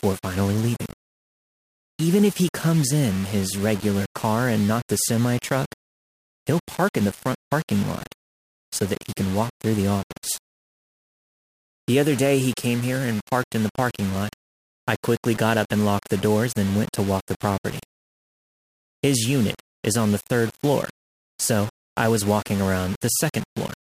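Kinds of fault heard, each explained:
Low bit depth without dither: Across the whole speech clip the sound is coarse and grainy, the likely result of rounding to about 5 bits with no dither. The error sits only about 20 dB below the speech and follows it, roughening quiet syllables and crackling as the level falls toward silence. Unlike steady dithered hiss, this grit rises and falls with the speech itself, and it lacks the swirly, frequency-dependent smearing of a lossy codec.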